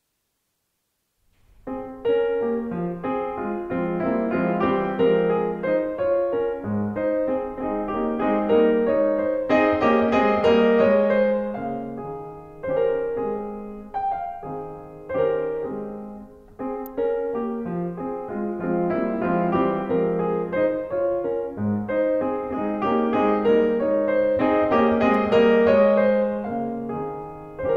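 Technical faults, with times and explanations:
16.86 s and 25.14 s: electrical switching spike, likely from a nearby switch or motor arcing into the audio line, adding a sharp snap over the music, peaking around -20 dBFS and then -30 dBFS.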